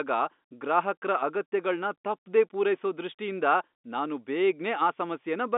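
No technical faults can be heard in this speech.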